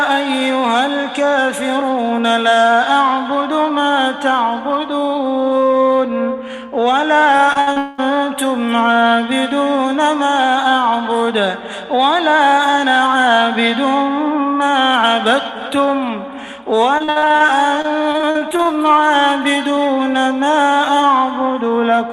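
From 7.37 to 7.78 s the audio turns choppy: repeated packet loss, with four short holes, the longest about 56 ms, each patched by stretching the preceding sound. Concealment covers roughly a third of that span. On a spectrogram, the affected slices show smeared, repeated harmonic bands with abrupt vertical edges, and the waveform shows brief looping segments.

Straight after, from 7.78 to 8.00 s, a fading continuation of the last sound fills about 0.2 s and never falls to silence before the audio resumes with that portion gone. This points to a long network dropout, likely a stretch where nothing arrived and the receiver kept extrapolating. It appears as a flat, frozen spectral smear, with the waveform holding a repetitive, slowly decaying pattern.

The same repeated packet loss returns, slightly more densely, from 16.98 to 18.67 s: nineteen holes, none longer than about 60 ms, with roughly a quarter of the stretch concealed. 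The sound stutters, and the spectrogram shows a broken comb of frozen frames interrupting the normal texture.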